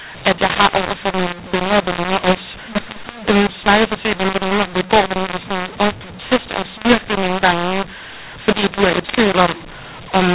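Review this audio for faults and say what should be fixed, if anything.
Mu-law and A-law mixed up, throughout: speech coded as A-law is decoded as mu-law, which scrambles levels and fills pauses with noise. Ordinary G.711 quantisation noise is faint and follows the signal instead. To prevent this, carry the companding law with the stream and make the decoder match it.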